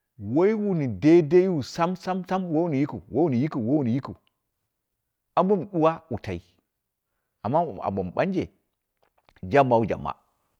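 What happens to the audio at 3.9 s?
Nothing goes wrong at 3.9 s; the speech runs through that moment intact, with no dropout, click or other fault.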